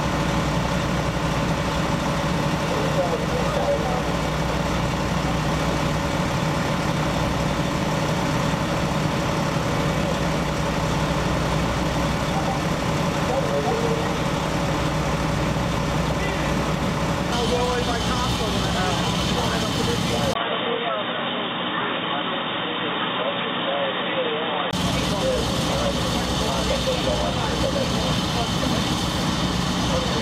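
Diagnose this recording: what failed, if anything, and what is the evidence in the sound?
From 20.33 s to 24.73 s the sound turns dull and boxy, with nothing above 3.8 kHz, a 20 ms silence at the change, little level shift and a new noise floor around 50 dB down. The likely cause is the input switched to a poorer, narrower-band device at the driver stage.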